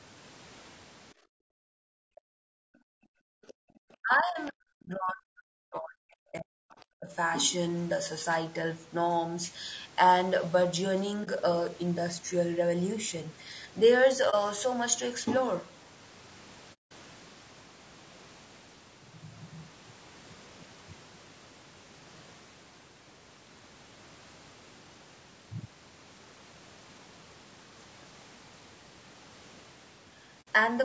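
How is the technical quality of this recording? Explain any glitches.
The speech is grainy and rough throughout, with several audible dropouts and gaps in the first seven seconds and later in the clip.

The low-delay AAC compression is audible across the whole clip: the voice sounds rough, with noise between harmonics. The likely cause is AAC-ELD's short frames at around 32 kbps.

From 1.14 to 3.74 s, the background is gated by the echo canceller. The room sound drops by about 40 dB while the loudspeaker plays, then returns.

The other side's voice leaks through twice: a brief scrap at 3.48 to 3.53 s, about 25 dB below the speech, and again at 4.46 to 4.50 s, about 30 dB down. These are likely faint remnants of the loudspeaker that the echo canceller left in the microphone signal.

Speech is suppressed in double talk from 4.02 to 6.76 s and again from 6.93 to 7.10 s. The voice drops by roughly 40 dB while both sides talk, likely because the canceller turns everything down.

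AAC frame loss with muting produces brief dips at 11.24 s and 14.30 s (about 30 ms each) and soft-edged holes at 16.73 to 16.92 s (180 ms) and 30.41 to 30.48 s (60 ms). The decoder zeroed the missing frames, so the sound fades out and back in.

The high end stops at 8 kHz, as the call's microphone processing does.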